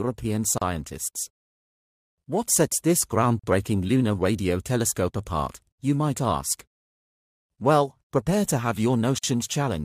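At 0.58 s, 3.39 s and 9.18 s the sound drops out for about 33, 42 and 50 ms, then resumes where it stopped. These are gaps at joins of encoded pieces: separately encoded segments were spliced untrimmed, leaving encoder delay and padding as silence.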